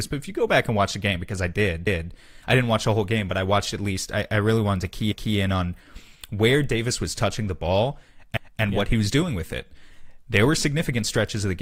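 A short stutter recurs in the speech at 1.87–2.12 s, 5.12–5.37 s and 8.37–8.62 s, where about 250 ms plays twice. This is overlapping chunks: the audio was handled in 3-second blocks, each starting 250 ms before the previous one finished.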